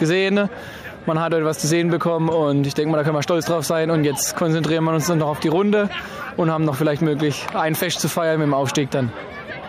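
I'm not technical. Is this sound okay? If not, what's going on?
Yes, it's fine: nothing in it sounds broken or glitchy, so there's nothing to worry about.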